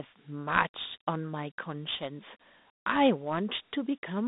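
Dialogic VOX ADPCM runs throughout: each sample is stored as a 4-bit step guess, and the resulting 32 kbps stream fits 8 kHz sampling. The speech is confined to about 200 Hz to 3.7 kHz, with nothing above 3.8 kHz, and a gritty hiss clings to every syllable.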